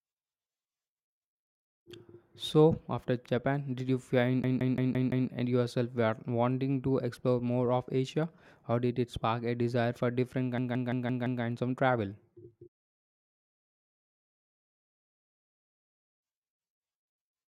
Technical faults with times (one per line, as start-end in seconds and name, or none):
4.44-5.29 system hang loop
10.58-11.43 system hang loop